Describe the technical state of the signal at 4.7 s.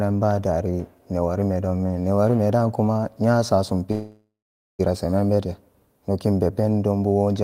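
At 4.7 s the speech is inside a call audio freeze running from 3.91 to 4.81 s. It follows "newarime da kuma nyasasum". The last sound is stretched into a fading buzz. For about the final 0.47 s it drops to silence. Speech then resumes with "seman bete nokin be", nothing lost. The stall likely came from delayed packets draining the jitter buffer. The receiver filled about 0.88 s, and everything after now runs that much late.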